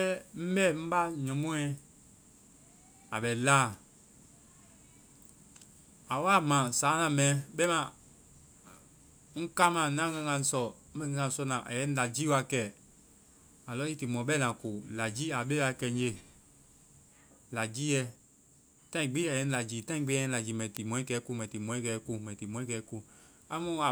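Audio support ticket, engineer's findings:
Bit error spike. Single flipped bit in memory or on the digital link, sample value jumping by a power of two and snapping back. Two sharp broadband ticks unrelated to the speech: 7.64 s, about -16 dBFS; 20.77 s, about -10 dBFS.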